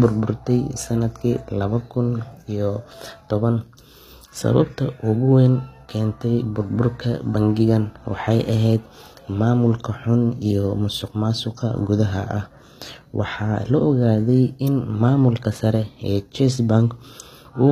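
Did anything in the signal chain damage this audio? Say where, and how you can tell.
Yes, at the codec stage, likely HE-AAC compression at a low rate, roughly what 24 kbps would give. Throughout the speech the treble is rebuilt from copied lower bands rather than coded, so s sounds come out gritty and lispy, and nothing remains above 14.9 kHz.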